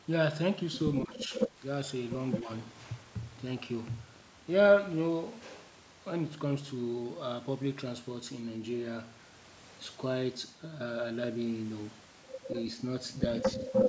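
Echo leak at 0.96 to 1.01 s: a copy of the speech returns 211 ms late, about 5 dB below the talker. The far end is likely on a loudspeaker, and its echo canceller let part of what its microphone picked up travel back down the line.

Speech suppressed in double talk from 1.05 to 1.62 s: while both sides overlap, the talker's level sinks in patches totalling roughly a third of a second, dipping by around 10 dB at worst. The canceller likely could not separate the live voice from the returning echo and turned both down together.

Echo leak again at 1.33 to 1.49 s, inside that overlap, with the 211 ms copy now about 5 dB louder than the talker. Then at 2.32 to 2.39 s the echo sits at roughly equal level.

Speech suppressed in double talk at 2.41 to 2.49 s: a brief, shallower dip of around 5 dB.

Echo leak at 12.5 to 12.64 s, well below the speech at around 10 dB down, then at 13.4 to 13.88 s, running to the end of the clip at about 5 dB above the talker. 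Within that last echo, speech suppressed in double talk at 13.57 to 13.61 s pulls the voice down by roughly 10 dB for a few hundredths of a second.

Across the clip, the sound extends only up to 8 kHz, consistent with the call's microphone processing.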